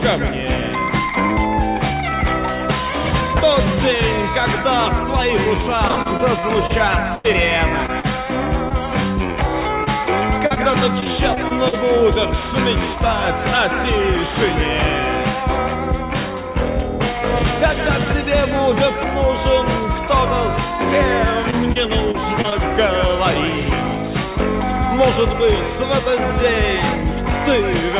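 From 5.88 to 7.26 s, repeated packet loss (robotic sound) chops the audio: seven gaps, the longest 91 ms, are each patched by extending the preceding sound, so about a fifth of the stretch is synthetic and comes out choppy.

Short concealed packet loss then appears as isolated holes at 7.86 s, from 8.00 to 8.13 s, and from 8.69 to 8.72 s. Each stands alone, only 20 to 40 ms of missing audio, filled briefly and blended back, so it registers as a single smear or wobble. The 8.00 s fill also stretches timing by roughly 15 ms.

The robotic pattern returns from 9.84 to 11.74 s (eight gaps, longest 42 ms) and from 21.50 to 22.53 s (five gaps, longest 29 ms). About a tenth of each span is concealed. Throughout, the call path carries nothing above 4 kHz, which fits a narrowband telephone codec.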